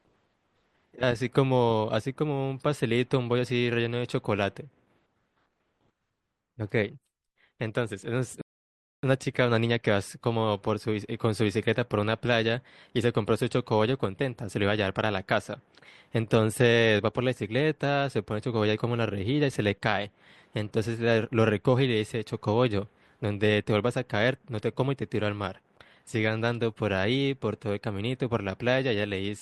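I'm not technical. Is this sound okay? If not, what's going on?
No. There is a rebuffering stall at 8.41 s, lasting until 9.03 s. The player ran out of downloaded audio, so the speech falls silent for about 0.6 seconds, then picks up exactly where it stopped. Nothing is skipped; the pause is simply added time.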